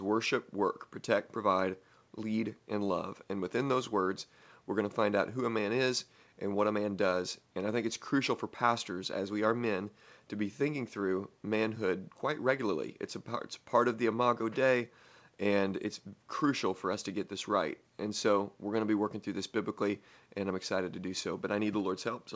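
Nothing technically wrong turns up in this speech clip: the room noise sits quietly about 43 dB under the talking, and the audio tops out at 8 kHz, just what you'd expect from a wideband call codec like G.722 at 64 kbps.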